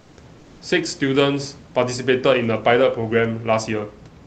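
From 0.03 to 0.15 s and 0.39 to 0.59 s, comfort noise in place of the background replaces the room hiss with a steady, featureless fill about 1 to 2 dB quieter, likely from Opus DTX, not a dropout, since sound never falls silent.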